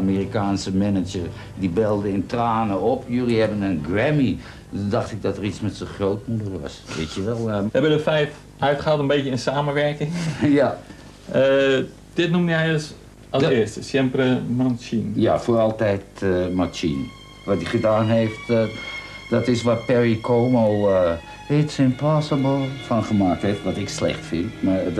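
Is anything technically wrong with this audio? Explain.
No, nothing is technically wrong with this audio.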